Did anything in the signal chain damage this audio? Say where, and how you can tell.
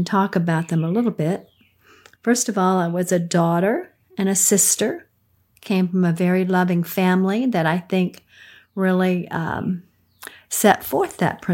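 No, nothing in the signal chain has audibly damaged this speech recording, and the signal holds steady with no stage leaving a mark on it.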